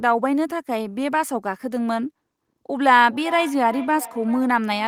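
From 3.04 s to the end of the clip there is feedback echo between two devices. A second device in the same room is on the call and replays what this microphone sent, and this microphone picks it up again. The local echo canceller only removes its own playback, so that returning copy passes through. The speech comes back roughly every 0.4 s, thinner and more ringing than the original, at about 14 dB below the direct speech.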